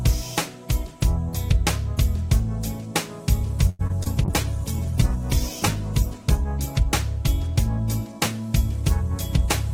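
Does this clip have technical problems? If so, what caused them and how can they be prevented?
Yes. A short stall from a late packet comes first: at 3.69 s a packet arrived late and the jitter buffer ran dry. The receiver held the last sound for about 0.1 s until 3.81 s, then resumed with nothing lost. A deeper adaptive jitter buffer would absorb that delay.

Short concealed packet loss follows twice, at 3.87 to 3.91 s and 4.03 to 4.08 s. In each case about 20 ms never reached the decoder, and the receiver covered the gap by extending the preceding sound, leaving brief smears. Forward error correction or redundant packets would recover these gaps.

A call bitrate drop runs from 4.25 to 6.52 s. The bandwidth estimate collapsed and the encoder was starved of bits, falling from about 48 kbps to about 12 kbps for roughly 2.2 s, so the sound turns coarse and dull. A steadier connection and gentler congestion control would keep the bitrate up.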